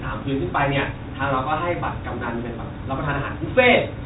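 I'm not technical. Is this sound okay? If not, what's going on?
Yes, nothing stood out as wrong when listening to this speech recording.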